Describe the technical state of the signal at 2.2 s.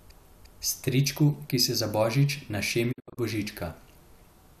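At 2.2 s the speech signal is intact, with no audible technical fault.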